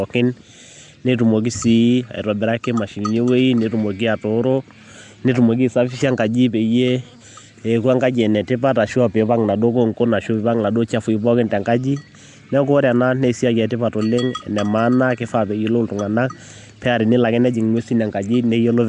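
A speech recording, most likely passed through the Nellymoser Asao codec from end to end, which packs each short block into a fixed, small number of bits and swaps quieter frequency bands for synthetic noise. Here the damage is plainly audible throughout: a rough, hissy halo hangs around the voice, the speech smears into a watery, underwater blur, and nothing survives above 10.6 kHz, a ceiling that fits a rate around 44 kbps.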